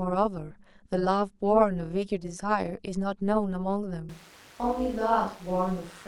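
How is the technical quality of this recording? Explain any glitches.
The technical quality is poor. A constant metallic buzz runs through the whole speech clip, and the sound changes abruptly near the end.

Overlap-add ripple is present from start to finish. The audio was split into windowed frames and reassembled with an overlap that does not add up to a steady gain, so the level pumps up and down about 11 dB once per frame, at around 200 Hz. This gives the speech a metallic buzz with extra tones around each note. A zoomed waveform shows a regular scalloped envelope. On a spectrogram, sidebands sit roughly 200 Hz on either side of the harmonics.

From 4.09 s to the end, the sound turns suddenly roomy and hollow. The bass thins, the level falls by about 5 dB, and background noise rises to roughly 25 dB below the speech. The likely cause is a switch to a distant microphone after the close one dropped out. 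The waveform shows a visible step down in amplitude at 4.09 s. The spectrogram shows weaker low frequencies, a raised noise floor between phrases, and reverberant smearing that trails each syllable.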